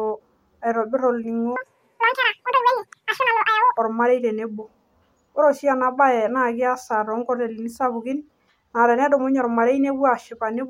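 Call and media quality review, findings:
Speech at double speed, 1.56 to 3.77 s: audio read two samples at a time (double speed), pitch up 12 semitones. Likely reader misframing sample pairs. Spectrogram: harmonics and formants shifted up an octave, compressed in time.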